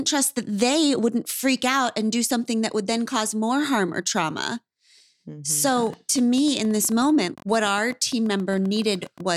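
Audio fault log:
5.68–9.21 s, train of clicks: about 13 uneven pops a second, around fifty in all, as loud as the speech, likely interference or a faulty connection.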